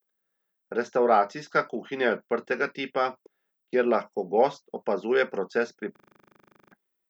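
From 5.96 to 6.72 s, a system hang loop repeats one 40 ms buffer at 25 Hz, buzzing; spectrogram shows repeating vertical stripes, waveform identical copies, about 0.7 s lost.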